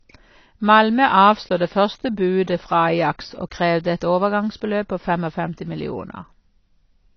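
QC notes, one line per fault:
Throughout, AAC compression: nothing is present above 6.6 kHz, so the speech sounds dull, and sibilants and sustained vowels carry a warbling, smeared texture. The cause is likely low-bitrate AAC-LC coding, consistent with 24 kbps, which narrows the bandwidth and coarsely quantises the spectrum.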